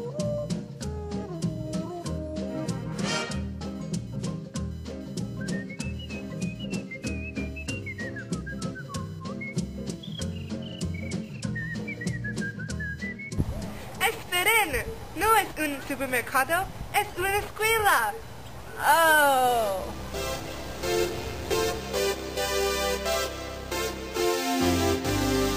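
Throughout the clip there is computer activity noise: a faint buzzing chirp that pulses at roughly 1 kHz and sits around 35 dB below the programme level. It does not track the audio itself but rises and falls with what the host machine is doing. Changing load on the processor, graphics card or mouse draws current through the ground shared with the audio circuit, and those fluctuations leak into the signal path as this scratchy, activity-dependent whine.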